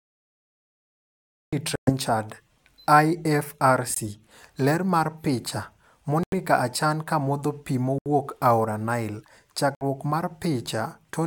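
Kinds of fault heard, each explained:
Cut-off start: the speech emerges from digital silence at 1.53 s mid-sound, with no natural attack, unlike a fade-in, which rises gradually.
Bluetooth stall: brief silences of 117, 19, 89, 75 and 60 ms at 1.76, 3.94, 6.23, 7.98 and 9.75 s, likely headphone buffer underruns; speech then resumes.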